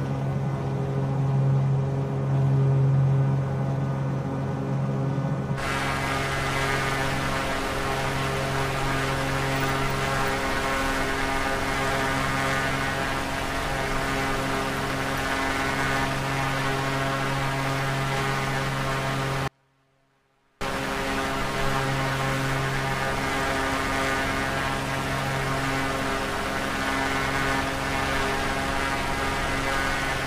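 The audio cuts out abruptly at 19.48 s and returns just as suddenly at 20.61 s, a gap of about 1.13 s. Rather than true silence, the break holds only a faint leak of the sound, roughly 40 dB below its normal level. This is an audio dropout to a faint residue, likely caused by the wanted signal being lost partway along the chain while the path after the break stayed live and carried only that weak bleed-through.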